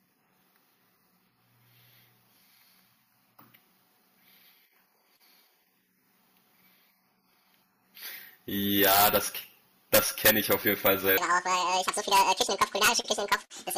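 From 11.18 s to the end at 13.77 s, a section at the wrong speed runs at 1.92 times normal, likely from playback against a mismatched clock. The speech turns hurried and high, raised by close to ten semitones. On a spectrogram, harmonics jump upward and compress in time; the waveform's syllable envelopes shorten abruptly.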